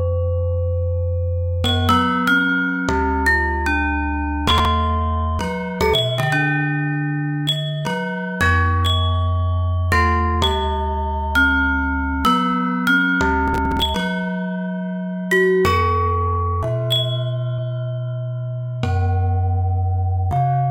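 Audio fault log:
4.48–4.65 s and 13.48–13.82 s: processor overload crackle. Buffers of around 5 ms miss their deadlines in runs, a handful in the first burst and roughly fifteen in the second. Each gap is filled with stale audio joined by hard edges, so the sound turns to gritty tearing. The waveform shows jagged discontinuities, and the spectrogram shows clustered vertical broadband streaks.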